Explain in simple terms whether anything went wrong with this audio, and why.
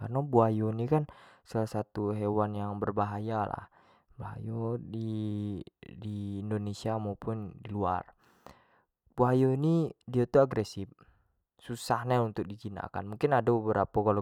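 Nothing went wrong; no faults are audible here.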